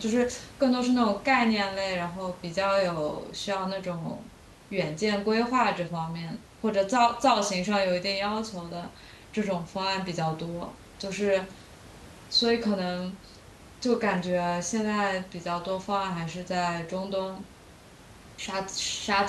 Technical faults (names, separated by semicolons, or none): none